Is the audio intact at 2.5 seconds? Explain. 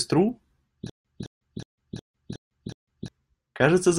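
No. At 2.5 seconds it is inside a stutter with silent gaps running from 0.90 to 3.08 s, where a 215 ms speech fragment repeats six times with 151 ms of dead silence between. This is likely a stalled stream replaying its last buffer on each retry, so the intended audio is lost.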